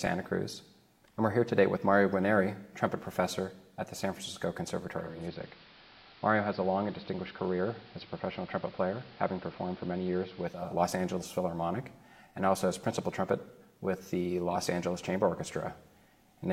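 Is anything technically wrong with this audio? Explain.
Yes. From 4.9 to 10.81 s, digital radio blending to analogue: the receiver cross-fades over 395 ms to the AM broadcast, adding hiss, and drops about 2 dB.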